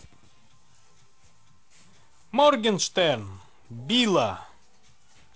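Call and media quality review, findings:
Nothing to flag here; the speech comes over the G.722 wideband link at 48 kbit/s with the expected reach up to around 7 kHz, a faint hiss up top and a touch of extra noise in the lower band at that rate.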